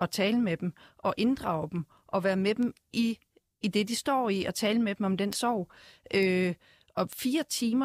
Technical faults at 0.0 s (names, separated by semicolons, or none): none